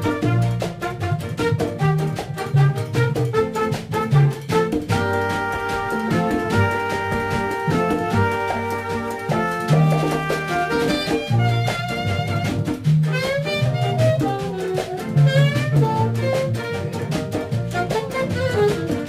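Throughout, crude rate conversion using nearest-sample picking, consistent with 48 to 44.1 kHz, adds gritty inharmonic fizz about 30 dB down, visible as spurious spectrogram lines.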